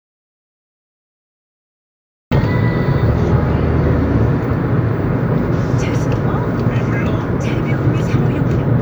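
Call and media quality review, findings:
Audio dropout to silence, 0.00–2.31 s, already under way when the clip opens. Silent, no room tone; sound enters abruptly at 2.31 s. Likely input loss (device disconnect, failed link or mute) while the recorder kept writing silence; content in the gap lost.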